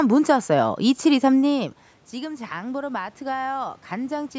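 From 1.53 to 4.33 s, automatic gain rising slowly lifts the level by about 5 dB after the talker moves away. Voice and room noise swell together, unlike a talker stepping closer.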